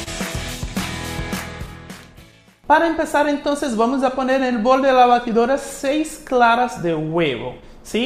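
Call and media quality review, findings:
Clock drift between sender and receiver, whole clip: sender clock about 2% slow, jitter buffer draining; recurring small timing hiccups, visible as uneven tiny seams across the waveform.

Short stall from a late packet, 0.03 to 0.08 s: jitter buffer ran empty, receiver held the last sound for 30 ms, nothing lost; spectrogram shows a flat, smeared 30 ms band.

Repeated timing corrections, 2.43 to 6.93 s: receiver repeating short pieces to match the slower sender, 98% speed, around a tenth of a second added; waveform shows sparse duplicated fragments, unevenly spaced.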